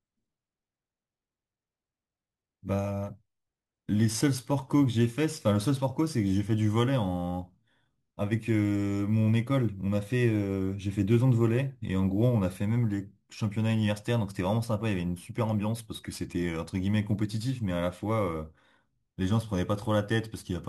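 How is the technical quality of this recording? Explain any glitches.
The recording has one clear flaw: crude rate conversion, present throughout the speech. The sample rate was changed without filtering. The artefacts fit a 32 kHz to 44.1 kHz conversion by nearest-sample picking. The repeated samples cause timing errors that create inharmonic tones roughly 30 dB below the voice. They sound like a gritty fizz that follows loud and bright passages.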